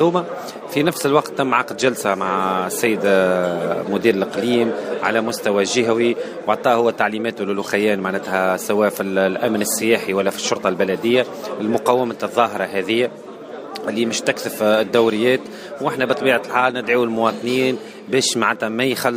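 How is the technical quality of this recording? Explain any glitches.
Nothing to worry about here: I can't hear a single glitch anywhere in the recording, so there's nothing to explain.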